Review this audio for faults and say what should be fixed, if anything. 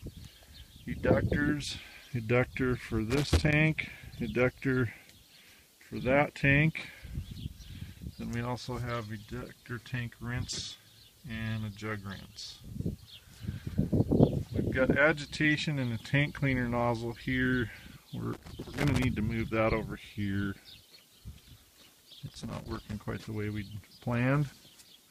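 Irregular bursts of crackle and scratching break up the audio at 3.10–3.53 s, 18.33–19.04 s and 22.28–22.93 s. This is loose connector crackle: a worn or dirty contact rapidly making and breaking, chopping the signal. Clean or replace the suspect connector and secure the cable so it cannot move.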